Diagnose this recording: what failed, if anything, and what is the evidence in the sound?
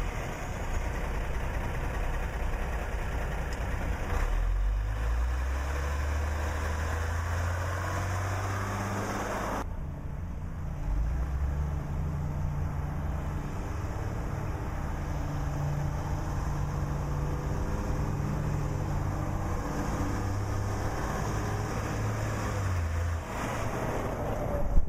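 The sample-rate conversion stage failed: crude rate conversion is audible throughout as a gritty, inharmonic fizz tracking the louder and brighter passages, roughly 30 dB below the sound itself. Samples were repeated rather than filtered, a pattern consistent with a 32 kHz to 44.1 kHz step-up.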